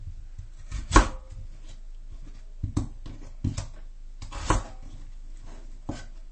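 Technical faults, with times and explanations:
Throughout, MP3 compression: the encoder was likely starved of bits, and the sound points to a very low bitrate, around 32 kbps. Short of data, it cut off all content above 8.4 kHz and discarded weaker frequency components, which drop in and out from one frame to the next. The audio is dull at the top and has a watery, swirling texture, with metallic chirps on bright detail and sharp onsets smeared.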